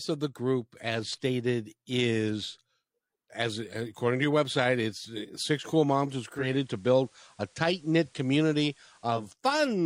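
At 6.26 s the speech undergoes digital radio blending to analogue: the receiver loses its digital stream and fades over about 311 ms to the FM broadcast until 9.37 s. Faint hiss appears, yet level holds steady, unlike a dropout or codec switch.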